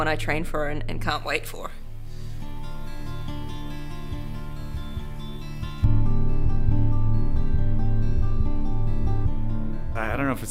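From 1.10 s to 5.84 s the audio turns thin, bright and sibilant: pre-emphasis left on, with the treble boosted about 11 dB at 10 kHz relative to 1 kHz, fitting a J.17 curve whose matching de-emphasis was never applied. The fixed, shelf-like lift separates it from ordinary harsh equalisation.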